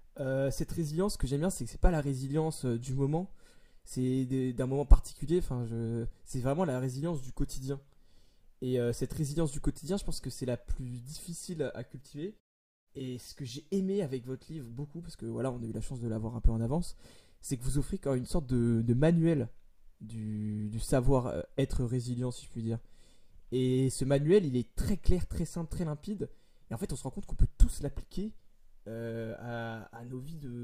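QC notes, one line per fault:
No faults are heard in this speech clip. In the pauses the muting fades the background to silence and brings it back in time for the next sound, with only very quiet sound lost.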